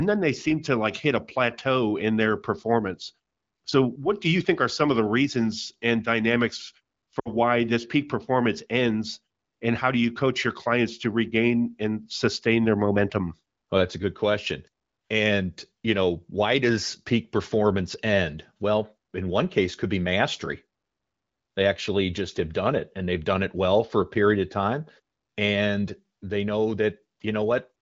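Lost AMR speech frames, 7.19 to 7.29 s: the decoder repeats its last good settings at falling gain, so the speech drops to near silence within two frames of the 60 ms gap.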